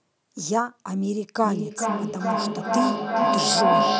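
Feedback echo between two devices begins at 1.43 s and runs to the end: the speech returns roughly every 0.4 s, thinner and ringing, while a second device replays it into the microphone. The loop builds, peaking about 4 dB above the speech instead of fading.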